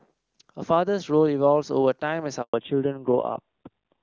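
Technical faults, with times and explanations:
2.42–2.54 s, handover gap: the speech fades within a few tens of milliseconds, leaving 120 ms of silence as the call switches networks. Unlike a random dropout, the sound changes character right afterward.
2.54 s to the end, fallback to narrowband: everything above 4 kHz vanishes and the speech turns dull and rough, pointing to a drop from high-rate HD Voice to a low-rate narrowband codec. A plain low-pass filter would not add roughness.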